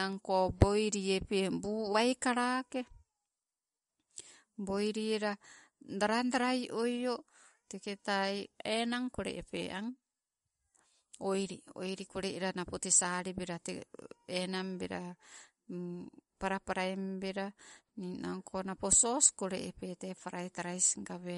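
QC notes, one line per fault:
Throughout: MP3 compression, likely at a bitrate near 50 kbps, cuts everything above 11.2 kHz and flickers weak frequency lines, so speech sounds dull, watery and swirly.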